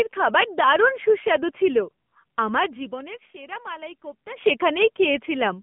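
The whole speech clip runs through the AMR narrowband mobile codec: nothing above 3.5 kHz, and a buzzy, synthetic edge that points to a low bitrate, around 7.4 kbps. From 0.84 to 4.56 s a loudspeaker feedback squeal rides on top, a steady 4.7 kHz tone swelling over roughly two seconds to about 5 dB above the speech.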